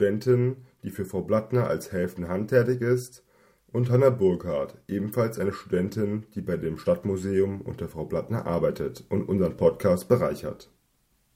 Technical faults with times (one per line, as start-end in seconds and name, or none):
none